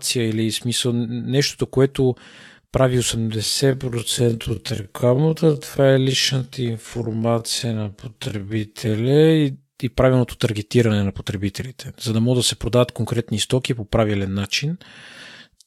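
Right after "смисъл нещото което прави", from 3.13 to 9.21 s, there's a time-stretched section: the speech drops to about half speed with the pitch unchanged, so it drags. Likely software stretching it by repeating short slices.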